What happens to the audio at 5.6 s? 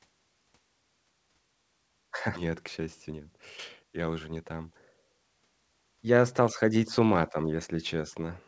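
At 5.6 s the speech runs on intact, with no dropout, glitch or distortion, only the steady high-frequency cut-off above 8 kHz that the call path imposes.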